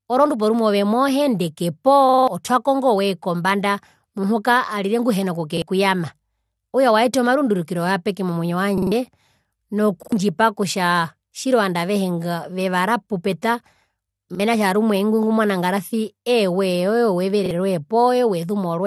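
Speech with short stutters at 2.09, 5.57, 8.78, 10.03, 14.35 and 17.46 s, where a slice of about 46 ms repeats with hard joins, which fits a 2048-sample buffer. These are repeated buffers: playback ran out of fresh audio and replayed the last block, up to four extra times at 2.09 s, skipping roughly a fifth of a second of speech there.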